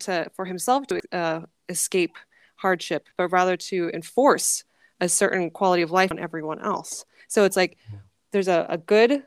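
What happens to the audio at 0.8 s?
Compressed frames skipped from 0.82 to 1.0 s: a run of whole frames is missing or rejected by the decoder, so the speech jumps ahead by about a fifth of a second. In a lossy codec, overlapping neighbour frames blur the join into a short smeared blip; in a lossless one, the join is a hard click.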